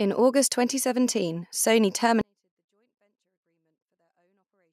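A 24-bit alignment error (too quiet) starts at 2.21 s and runs to the end: 24-bit samples sitting in the low bytes of 32-bit words are read as full 32-bit values, dropping the clean speech by about 48 dB to near silence.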